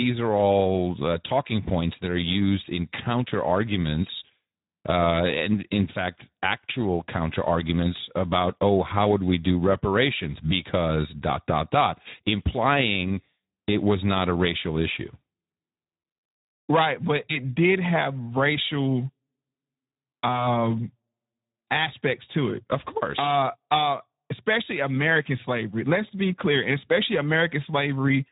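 Speech, carried through the Speex codec for its whole length. There is nothing above 3.8 kHz, so sibilants and consonant detail are dulled and the band is narrowband telephone width. The coding damage is plainly audible: with few bits left for the excitation, the CELP model reproduces the voicing as a rough, noisy buzz, giving a hoarse texture throughout. The degree of roughness fits a low setting of around 11 kbps.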